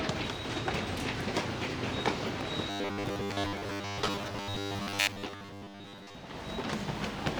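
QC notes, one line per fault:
2.70–6.16 s, robotic sound from repeated short buffers: the sound turns into a rigid, metallic buzz pitched at 100 Hz that still loosely tracks the original's rise and fall. The likely cause is audio arriving too seldom, so the playback side fills the gaps by looping the latest 10 ms chunk over and over. That fixed repeat imposes the 100 Hz tone, while much of the real audio, well over half, is skipped.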